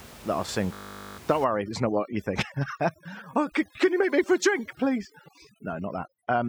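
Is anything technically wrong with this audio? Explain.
Yes. There are two faults.

From 0.74 to 1.18 s there is a system hang loop. The computer or its audio driver stalled. The sound hardware kept replaying the same 20 ms of its buffer. That slice repeats about 22 times, so it sounds like a steady buzz at 50 Hz, not speech. About 0.4 s of the real recording never arrives. Speech resumes only after the system recovers.

From 1.44 s to the end, at about 6.5 s, there is overdone noise removal. A noise reduction process is working far too hard on the room noise, which sits about 20 dB below the speech. It shuts down individual frequency bands whenever they fall near its noise estimate. Quiet parts of the speech get removed along with the noise. The background in the pauses drops and breaks up into twinkling specks.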